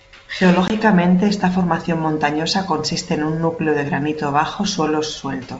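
Around 0.68 to 0.76 s there's packet loss on an ADPCM call, probably a single packet. You get a sharp 20 ms hole, then the decoder's predictor and step size are out of step with the sender's, so the speech comes back slightly distorted before settling. The G.722 wideband coding sounds clean, consistent with the full 64 kbit/s mode.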